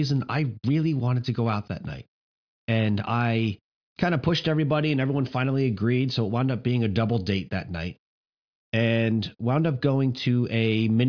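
Speech recording with no audible technical faults anywhere.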